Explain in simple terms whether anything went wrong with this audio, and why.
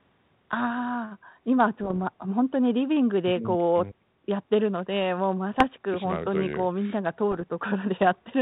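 Bit errors on an ADPCM link at 1.81–1.97 s, 5.57–5.64 s and 7.31–7.43 s: scattered flipped bits upset the decoder's tracking, so the speech pops and roughens briefly.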